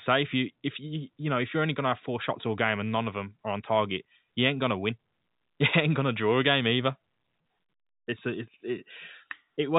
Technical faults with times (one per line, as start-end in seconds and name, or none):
none